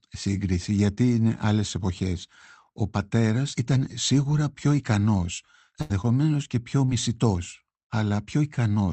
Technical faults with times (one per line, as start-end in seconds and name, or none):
5.81-5.92 burst of packet loss
6.02-6.05 short concealed packet loss
6.85-6.90 short concealed packet loss